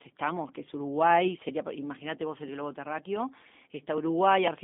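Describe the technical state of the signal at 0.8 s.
At 0.8 s you're hearing G.729 codec damage, and it isn't local; it runs through the whole clip. The speech is being rebuilt from a vocal tract filter, a pitch predictor and a few pulses per short frame rather than carried as a waveform, which fits an 8 kbit/s G.729A stream. It's band-limited to roughly 200 Hz to 3.6 kHz with nothing above about 3.7 kHz, so it sounds dull and telephone-like, with a plainly audible rough, synthetic edge.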